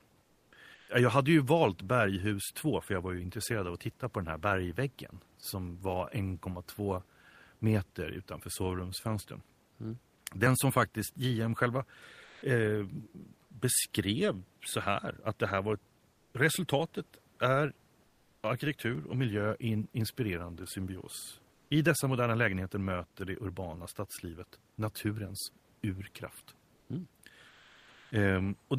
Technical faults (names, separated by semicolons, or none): comfort noise in place of the background; sound dropped by the voice detector